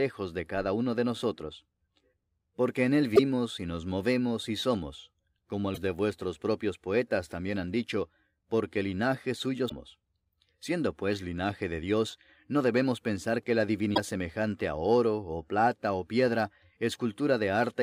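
Damaged data in a compressed stream appears four times, at 3.12 to 3.19 s, 5.71 to 5.78 s, 9.65 to 9.72 s and 13.91 to 13.98 s, each lasting about 70 ms. At each point, corrupted bytes make the decoder misread or reject the affected frames, lose sync and hunt for the next valid frame header before playback recovers. Each event is heard as a brief chirp, squawk or blip cutting across the sound.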